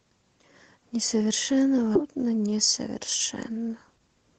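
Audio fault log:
1.95–1.97 s, skip ahead: The speech jumps forward with no gap at all. About 0.7 s of talk never plays. Later audio was already waiting, and the lost stretch was dropped in transit or discarded by an overflowing jitter buffer. The two sides butt together almost directly.
3.8–4.38 s, jitter buffer speed-up: The speech runs about 19% fast but keeps its pitch, so it sounds hurried. The buffer was holding too much audio. To shrink the delay, it cut many short pitch-period pieces in a row, roughly a tenth of a second in total.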